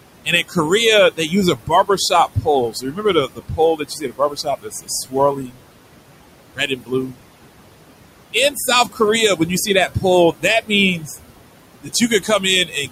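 Throughout the speech, the background sinks between phrases and swells back underneath them. These are noise suppressor artifacts. The suppressor cuts what it judges to be steady noise by about 21 dB frame by frame, and here it is acting on room noise that sits about 12 dB below the speech.

At 0.25 to 0.57 s, 1.11 to 5.64 s, 6.54 to 7.16 s, 8.33 to 9.0 s, 9.36 to 11.17 s and 11.83 to 12.91 s, soft consonants and quiet stretches sound swallowed or faint, falling by about 15 to 22 dB. This is speech cut by the noise suppressor, which mistook weaker speech for noise. The longest span loses around two seconds in total.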